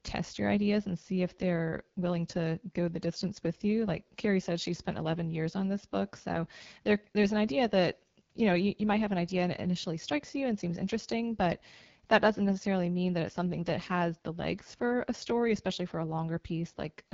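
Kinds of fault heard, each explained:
AMR wideband (HD Voice) codec, throughout: the speech is modelled below 6.4 kHz with a pulse-excited vocal tract filter, and the band above is filled with shaped noise. At a very low rate, which fits about 8.85 kbit/s, the speech sounds plainly rough and raspy.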